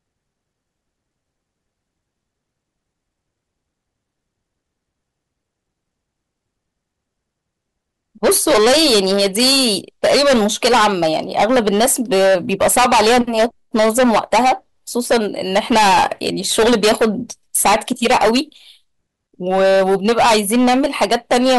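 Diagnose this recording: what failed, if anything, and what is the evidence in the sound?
Hard clipping throughout, at the converter or a gain stage ahead of it: the speech is driven about 18 dB too hot, so plenty of peaks flatten into harsh fuzz.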